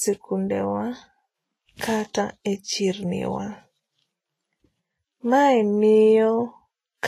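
Speech throughout the clip carries plainly audible Vorbis compression damage, likely from encoding at low quality. Nothing is heard above 14.1 kHz, where the encoder has cut the top off. Below that limit the treble sounds hissy and grainy. Fine detail there has been quantised so coarsely that it turns into noise of similar energy. Consonant attacks come out blurred. The degree of damage fits a bitrate of roughly 27 kbps.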